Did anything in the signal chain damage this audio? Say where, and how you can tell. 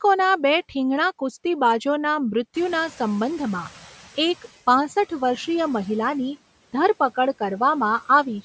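Yes, in the call processing stage. Just after the room noise jumps by about 15 dB at around 2.5 s, the background noise behind the speech comes through only partly reduced from 2.54 s, then sinks over the next 1.85 s until about 4.39 s, ending up about 9 dB lower. This is the noise suppressor catching up: its estimate of the background lagged the sudden rise, so reduction was weak until the estimate adapted.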